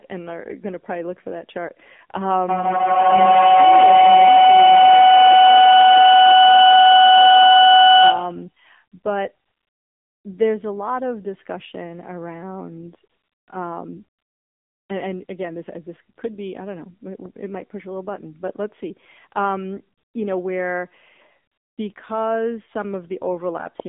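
Throughout, speech passes through the AMR narrowband mobile codec at a low bit rate, consistent with a mode around 7.4 kbps, leaving only 200 Hz to 3.6 kHz and a buzzy, synthetic tone.

From 2.49 to 8.57 s, a feedback howl builds as a microphone-loudspeaker loop gains level each trip. It narrows to a tone near 700 Hz, peaks about 13 dB above the speech, and pulses roughly every 150 ms.

AMR comfort noise appears at 9.46–10.24 s, 13.10–13.48 s, 14.18–14.90 s, 15.26 s, 16.16 s, 19.98–20.14 s, 21.52–21.78 s and 21.94 s. Speech frames stop during detected silence, and smooth synthetic noise switches in and replaces the real background.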